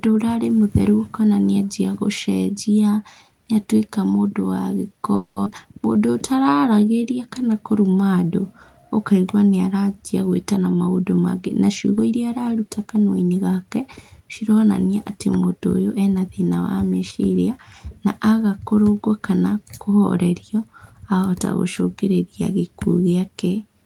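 At 5.15 s the sound stalls for about 210 ms, trailing off as a fading buzz or hiss before carrying on. That's likely a call audio freeze, with packets held up until the jitter buffer ran dry. Right after, at 5.44 to 5.48 s, there's a skip ahead: roughly 150 ms of audio vanishes and the two sides butt together almost seamlessly. From 5.93 to 7.17 s a jitter buffer slow-down kicks in, with repeated pitch periods stretching things to 89% speed. That adds 138 ms, so the sound is drawn out at the same pitch. Then from 10.58 to 12.14 s a jitter buffer speed-up trims short pieces, running at 111% and dropping around 200 ms, so it sounds a bit hurried.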